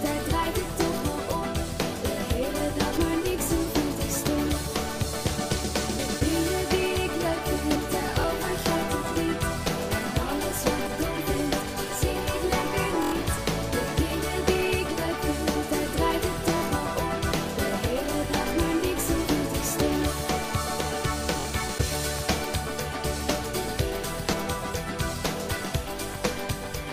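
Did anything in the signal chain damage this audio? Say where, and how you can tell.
Yes. There are jumps where the sound skips forward with no gap, at 2.97, 5.99, 7.76, 10.87, 13.38, 17.32, 19.27 and 24.33 s. Most skip about a twentieth of a second; the ones at 10.87 and 17.32 s lose closer to 150 ms. This is likely a dropped buffer (overrun) at the driver or buffer stage: capture blocks were overwritten before the software read them, so the surrounding audio was spliced straight together.

Separately, a brief buzzing repeat of a tiny slice of sound occurs at 8.21 to 8.24 s (23 ms), 13.03 to 13.12 s (93 ms, the longest and most machine-gun-like), 16.57 to 16.62 s and 21.40 to 21.45 s (46 ms each). This is Bluetooth stutter on the wireless playback link. When packets go missing, the receiver replays its last roughly 23 ms chunk, which points to one, two or four lost packets here. Playback then resumes further along, as if the sound had kept running.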